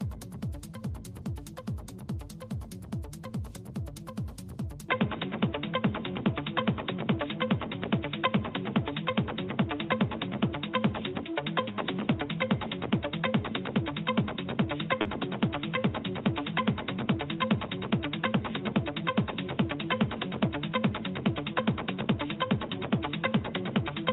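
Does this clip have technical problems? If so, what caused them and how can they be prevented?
Yes. From 4.89 s to the end, the sound likely reflects an input switched to a poorer device, such as a fallback microphone or a headset's call profile. The new path passes nothing above 3.8 kHz, so the audio abruptly turns dull and boxy, shifts in level by roughly 5 dB, and carries a new background noise floor roughly 35 dB below the signal. The change happens with no gap at the switch. Locking the input device in the recording software and turning off automatic device switching prevents this.

Around 15.01 to 15.07 s there is a short concealed packet loss. About 40 ms of audio failed to arrive in time, and the receiver filled the hole by extending the preceding sound before blending back into the real stream. This leaves a brief smear or wobble. A more stable connection and a larger jitter buffer would prevent it.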